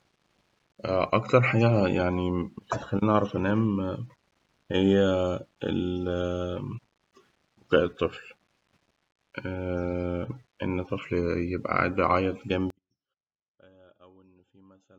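A short speech recording, clean in its opening stretch, collapses at 12.70 s and stays collapsed to the end: the level drops by about 32 dB, leaving only a faint residue with the centred voice nearly gone. The likely cause is one channel inverted, so the identical material in left and right cancels when the pair is summed to mono.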